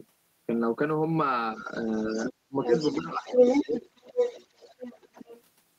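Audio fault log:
1.56–2.32 s and 2.64–5.43 s, other side's voice leaking through: a second voice runs under the talker. It is faint at first, about 15 dB down, and later roughly as loud as the talker. The likely cause is loudspeaker echo the canceller left in. A spectrogram shows two unrelated, overlapping harmonic stacks.
1.63–1.74 s, 2.14–2.72 s, 2.95–3.26 s and 3.63–3.71 s, speech suppressed in double talk: the talker's level dips while the other side speaks. The dip is slight first, then nearly 30 dB deep, then moderate twice. The likely cause is the canceller turning down both voices together. The waveform shows notches in the envelope, and the spectrogram shows darkened gaps.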